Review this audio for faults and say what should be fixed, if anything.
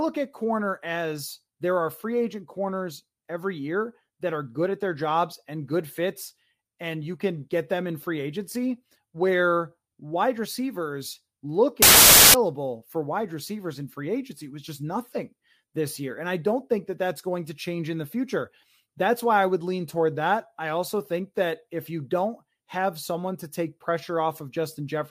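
Between 11.82 and 12.34 s, right after "wide receivers look" and before "for wide receivers in", the speech collapses into loud, harsh noise with the voice faintly buried inside it, sped up and raised in pitch by a factor of 1.5. That is a wrong sample width: 16-bit data read back as packed 24-bit, so each value straddles mismatched bytes and only some keep the true top bits. Unlike a byte-order swap, which leaves speed and pitch intact, this one also shifts the timing, since three bytes are consumed per sample instead of two. To prevent it, carry the sample format with the data and check that the reader's width matches the writer's before decoding.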